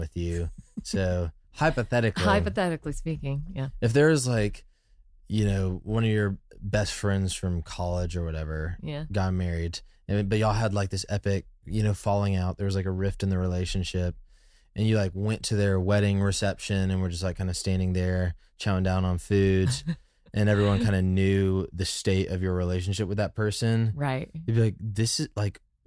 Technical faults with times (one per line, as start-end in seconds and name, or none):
none